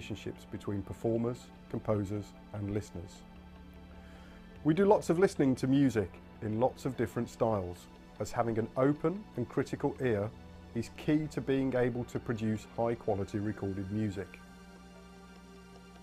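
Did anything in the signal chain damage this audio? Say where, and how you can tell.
Yes. Mains hum from the analogue wiring runs through the whole clip: a steady 60 Hz tone sitting roughly 25 dB below the signal, likely from a ground loop or a nearby transformer. Its fixed pitch separates it from wind rumble or handling noise.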